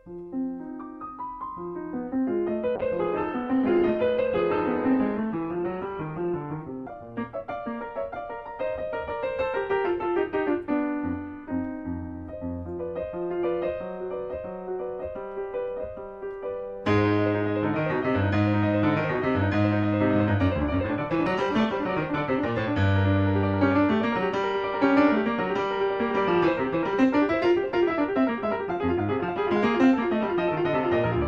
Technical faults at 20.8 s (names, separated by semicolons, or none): call bitrate drop